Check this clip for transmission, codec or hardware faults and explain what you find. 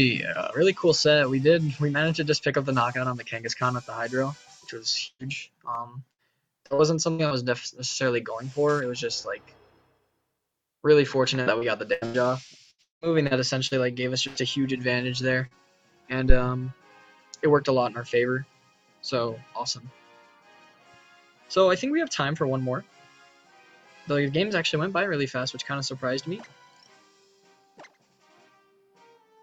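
The clip has several transmission faults, a scratched-disc playback fault and one hardware fault.

Burst of packet loss at 5.07–5.22 s, 6.11–6.21 s and 14.27–14.38 s: about 120, 80 and 80 ms of audio went missing. The receiver extended the last sound and faded it, and the first burst ends in about 50 ms of silence. On a spectrogram these appear as smeared, decaying bands, followed by a jump where the audio resumes further on.

CD scratch ticks from 5.75 to 6.52 s: four brief ticks, the longest about a millisecond, where damaged disc data could not be rebuilt and was patched over. The waveform shows tiny spikes, and the spectrogram shows thin vertical lines.

Repeated packet loss (robotic sound) at 6.66–7.34 s, 11.43–12.24 s and 12.71–13.74 s: four, four and five gaps were concealed, covering about a third of each stretch. The longest gap is 190 ms, in the last stretch. The sound turns choppy, and the spectrogram shows repeated, frozen, stripe-like patches.

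Short concealed packet loss at 15.47–15.54 s: about 40 ms was filled by continuing the preceding sound and blending back into the real audio. It is heard as a brief smear, visible as a short blurred patch.

Phantom power thump at 16.30–16.39 s: a supply switched on a live input sent a voltage step through the coupling capacitors. It produces a deep thump that decays in about 21 ms. The waveform shows a sharp low-frequency excursion.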